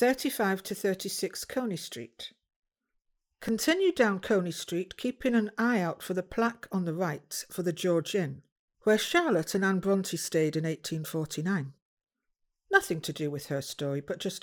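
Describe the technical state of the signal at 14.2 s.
At 14.2 s the signal is intact, with no audible fault at that moment.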